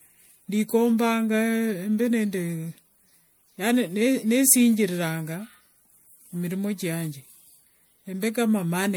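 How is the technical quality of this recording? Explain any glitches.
The recording is degraded by one fault that runs through the whole clip.

Generation loss, present from start to finish: the speech sounds swirly and hollow, with a smeared, watery texture and softened consonant attacks. The likely cause is the audio being decoded and re-encoded as MP3 around four times, at a rate that fits 96 kbit/s. Each pass quantises on a shifted frame grid, so noise and spectral gaps pile up beyond what one encode would leave, while content still reaches 20.9 kHz.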